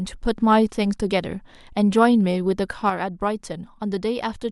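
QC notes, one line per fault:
2.90–4.52 s, one channel drops out: speech drops abruptly by about 6 dB until the end. Likely one stereo channel lost before the mono sum.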